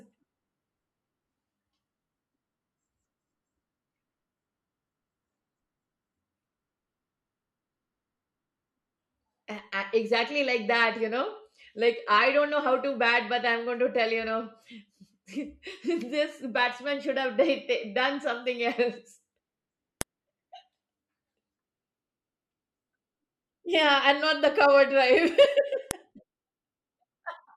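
At 20.01 s a sharp, loud click cuts across the speech, and a second snap follows at 25.91 s. Both are file header played as audio: the clip was assembled from separate WAV pieces whose headers were left in place at each join. The header's few dozen bytes are decoded as sample values, producing an abrupt transient that bears no relation to the surrounding signal and marks exactly where each new piece begins.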